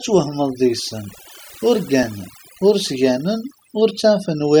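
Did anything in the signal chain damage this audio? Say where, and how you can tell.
Yes: overdone noise removal runs through the whole speech clip. It sits in the processing stage, where a noise suppressor set far too aggressively shuts off individual frequency bands near its noise estimate. The background drops and breaks up into twinkling specks, and softer speech components vanish.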